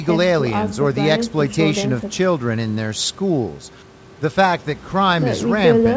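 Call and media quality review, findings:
No faults found in the call audio.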